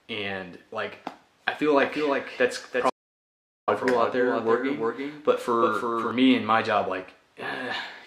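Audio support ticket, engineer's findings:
Doubled audio track, 1.81 s to 6.11 s. A second full-band copy trails the original by roughly a third of a second, a few dB quieter, and it cuts in and out abruptly. Likely a second capture path or an edit holding two out-of-step copies. Unlike reverb or slapback, the copy has no decay or room colour and doesn't repeat.

Audio dropout to silence, 2.90 s to 3.68 s. The audio cuts to silence for 0.78 s mid-flow, then returns, and the material in the gap is lost. Likely a lost input, such as a device disconnect, a link failure or a stray mute, with the encoder writing silence. Unlike a fade or a noise gate, there is no room tone and no taper.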